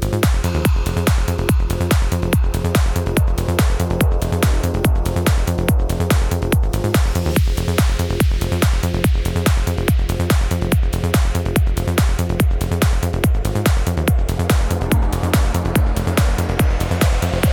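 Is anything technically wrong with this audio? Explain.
No, there's nothing technically wrong to report in this audio.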